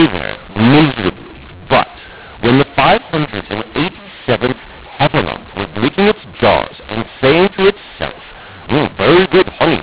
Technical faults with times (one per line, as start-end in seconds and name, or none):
0.00-9.82 mu-law and A-law mixed up